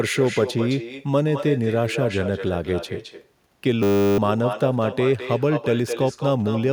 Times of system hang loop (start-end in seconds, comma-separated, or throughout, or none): 3.83-4.18